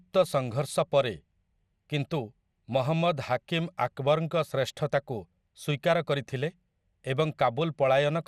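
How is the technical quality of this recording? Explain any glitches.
The speech is audibly degraded by MP2 compression throughout. Nothing sounds above about 14.3 kHz, so it is dull. The likely cause is too few bits, consistent with roughly 80 kbps. Upper sub-bands flicker off, and coarse quantisation leaves a gurgling, granular texture.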